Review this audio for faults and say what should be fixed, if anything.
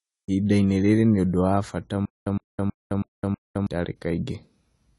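The whole clip carries AAC compression damage. Nothing sounds above about 11.3 kHz. The speech is dull and smeared, with a fizzy edge on sibilants. This likely comes from AAC-LC at a low bitrate, around 32 kbps. The coder discards high bands and coarsely quantises the rest. Prevent it by encoding at a higher bitrate or keeping a lossless master.

Right after "nĩ ũndũ wa bata", a stutter with silent gaps runs from 2.05 to 3.67 s. A 111 ms fragment plays five times. Each repeat is followed by 212 ms of digital silence, so it recurs every 322 ms. The likely cause is a stalled player replaying its last buffer on each retry. The audio meant for that span is lost. Prevent it with larger buffering and recovery that resumes rather than repeats.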